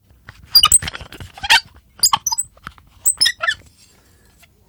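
Everyday sounds with hard clipping in four bursts: 0.55–0.76 s (about 14 dB over), 1.51–1.57 s (about 8 dB), 2.04–2.14 s (about 6 dB) and 3.06–3.27 s (about 3 dB). Peaks are sliced flat, giving a harsh, bright crackle rather than the warmer rounding of soft saturation.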